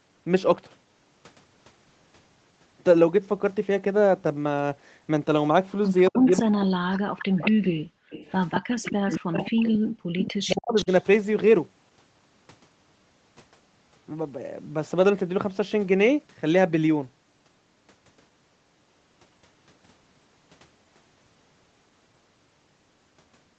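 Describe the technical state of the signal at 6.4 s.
At 6.4 s the speech sits inside a stretch of speech suppressed in double talk, running from 6.1 to 7.66 s. The level sinks by as much as about 40 dB and the sound breaks up in pieces, which is likely the call's echo canceller turning everything down because it could not tell the local talker from loudspeaker echo while both sides spoke. Unlike a network dropout, the losses come as level dips and dulling rather than clean silent gaps with concealment artefacts.

The same moment is the tail of a short echo leak, from 6.27 to 6.4 s. A faint copy of the speech arrives about 223 ms behind the original, roughly 10 dB quieter, most likely where one side's canceller let some of its loudspeaker pickup back through. The copy's fixed lag sets it apart from room reverberation, which smears the sound continuously instead of repeating it as a distinct delayed scrap.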